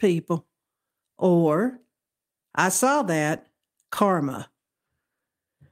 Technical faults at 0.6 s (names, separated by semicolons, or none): clock drift between sender and receiver; repeated timing corrections